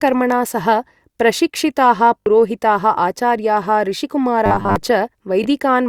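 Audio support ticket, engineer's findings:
Bluetooth stutter, 2.20–2.26 s and 5.44–5.46 s: link dropped packets and the receiver replayed its last buffer. About 61 ms lost at the first, consistent with three packets, then about 20 ms (one packet). Sound stutters briefly, resumes further on.

Robotic sound from repeated short buffers, 4.46–4.76 s: likely audio arriving too seldom, with the last 10 ms buffer looped over most of the span. Real audio skipped. Result is a rigid 100 Hz metallic buzz loosely tracking the speech.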